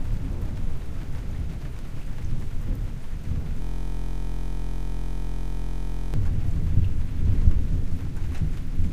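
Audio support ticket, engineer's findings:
Steady buzz at about 43 Hz replacing the sound, 3.62–6.14 s. System hang loop: driver/host froze, hardware kept replaying one 23.22 ms ring-buffer segment, which fits a 1024-sample buffer, over a hundred times. Probable component: audio driver or host computer.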